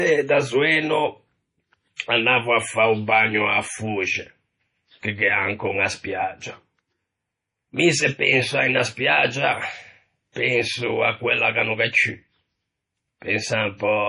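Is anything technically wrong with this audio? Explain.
Yes. Throughout the speech there is heavy damage, likely from MP3 compression. Nothing remains above 10.5 kHz. Weak frequency lines flicker between frames, so the sound turns watery and swirly, with chirpy s sounds and smeared attacks. This fits a starved 32 kbps stream.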